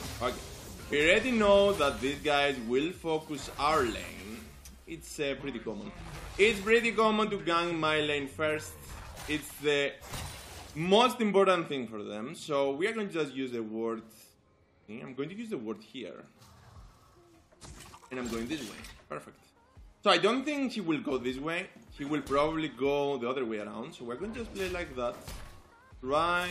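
At 0.92 s and again at 17.94–17.96 s, compressed frames are skipped: roughly 70 ms jumps ahead, consistent with about three 23.2 ms frames, heard as the audio abruptly jumping forward.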